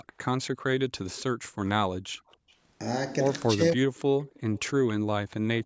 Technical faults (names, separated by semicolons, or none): echo leak; background gated by the echo canceller; speech suppressed in double talk